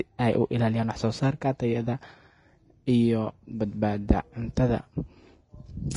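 Vorbis compression runs throughout this speech clip: nothing reaches above 10.6 kHz, and the treble sounds hissy and grainy, likely from low-bitrate Vorbis coding consistent with about 31 kbps.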